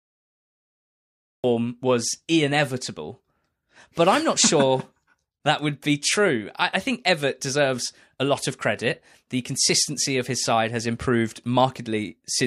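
The clip opens with a cut-off start. From 0.00 s to 1.44 s there is only digital silence, with no room tone or noise at all. At 1.44 s the speech appears abruptly, already partway through a sound. There is no natural attack and no fade-in. The capture or stream began late, so the true beginning was never recorded. The listener drops straight into the middle of an utterance, with its onset missing.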